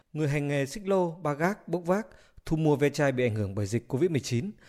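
It's a speech recording, and at 1.44 s there's a sudden gain jump: the level steps up by about 4 dB in a single sample and stays there to the end. The background noise rises right along with the speech, so the noise floor steps up too. There's no ramp or fade at all, which most likely means a digital gain setting or bit shift was applied instantly.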